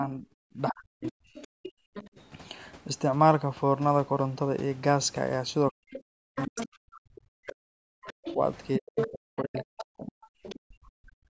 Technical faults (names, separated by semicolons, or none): speech suppressed in double talk; other side's voice leaking through